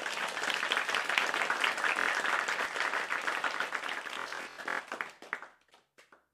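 A recording of everyday sounds, with two sharp single clicks at 0.95 s and 2.65 s. Each is a hard tick with no gap in the sound, a thin vertical streak across the spectrum. The likely cause is dropped samples: a fraction of a millisecond of the stream went missing, so the waveform jumped straight to a later value. That step is far too brief to remove anything audible, but the discontinuity itself produces the click. A different fault, Bluetooth stutter, appears as a brief buzzy repeat from 2.00 to 2.08 s, then as a longer machine-gun rattle from 4.14 to 4.81 s. Audio packets arrived late or not at all, and the receiver kept replaying its last short slice until fresh data came. In the first event about 70 ms of sound is lost. In the second, about 418 ms is lost in bursts spread over roughly 650 ms, the longest single gap 92.9 ms. After each gap the sound picks up further along, as though it had kept playing underneath.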